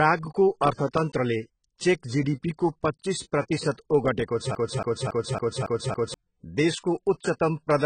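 Speech clip with two problems. The whole thing carries heavy AAC compression damage: nothing above about 9.3 kHz, so it sounds dull and smeared, with a fizzy, warbly edge on sibilants. That points to AAC-LC at a very low bitrate, something like 16 kbps. Then from 4.55 to 6.14 s there's a broken-record loop, where a 0.28 s fragment plays six times back to back and the audio that should have filled that stretch is gone. The likely cause is a player or stream stalling and resending its last buffer.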